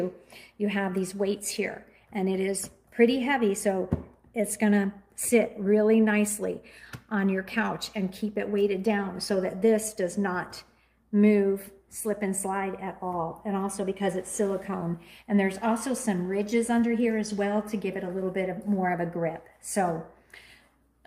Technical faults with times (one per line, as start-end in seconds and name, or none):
none